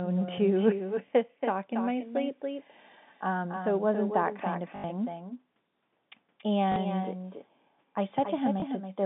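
A speech recording over a G.711 telephone line, band-limited to roughly 150 Hz to 3.6 kHz. It has echo with no canceller throughout. Every phrase returns roughly 300 ms later, about 8 dB quieter and thinner. The far end's loudspeaker feeds its microphone, and nothing removes the returning copy. There is also packet loss with the last packet repeated, heard as brief robotic stutters at 4.76 to 4.84 s (80 ms) and 6.72 to 6.76 s (40 ms), and a small blip at 8.60 to 8.62 s (20 ms). Missing audio was filled by replaying the previous chunk. The lengths fit 20 ms packets, so the longer runs buzz near 50 Hz.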